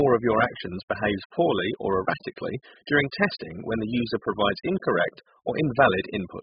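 Throughout the speech, the sound is dull and smeared, with nothing above 5 kHz and a warbling, fizzy texture on sibilants, likely heavy AAC compression at a very low bitrate. On a spectrogram, the top is cleanly cut off.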